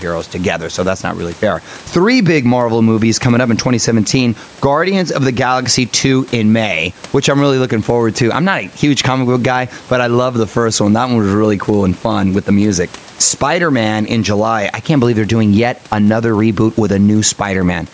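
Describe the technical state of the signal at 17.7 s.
At 17.7 s the signal shows gain pumping, which runs through the whole clip rather than starting at that point. The sound is squashed: loud and quiet parts sit close in level. The room noise sits about 33 dB below the speech, and the gain swings by around 10 dB. The likely cause is input gain set far too high, with a fast limiter or compressor clamping down on every peak.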